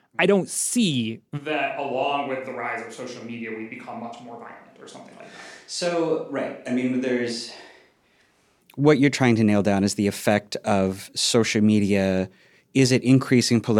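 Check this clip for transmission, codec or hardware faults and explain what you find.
One hardware-side fault stands out: a switch to a distant microphone. From 1.39 s to 8.59 s, the close microphone's feed likely dropped out and a pickup farther away took over. At that range the mic captures more room reflection than direct sound, so the speech turns hollow and roomy, loses low end and falls about 10 dB in level, while room noise rises to roughly 35 dB below the speech. Both transitions are abrupt.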